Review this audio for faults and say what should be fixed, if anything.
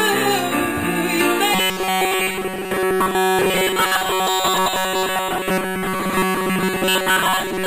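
From 1.53 s to the end, the sound turns into robotic sound from repeated short buffers, a rigid metallic buzz at 188 Hz. The likely cause is audio arriving too seldom, so roughly 70 percent is a repeated slice of about 5.3 ms. A spectrogram would show evenly spaced horizontal harmonics from 188 Hz upward, and the waveform would show identical short cycles repeating. Prevent it by fixing the delivery timing or enlarging the input buffering so the stream never runs dry.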